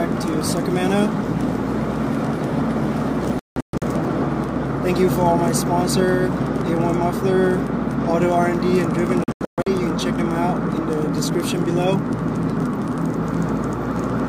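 Digital broadcast dropout mutes the audio twice, in clusters of short silent holes from 3.39 to 3.84 s and from 9.24 to 9.71 s. The holes fit whole lost frames. Unlike a single edit gap, each cluster scatters its silences over about 430 ms, with clean sound between them.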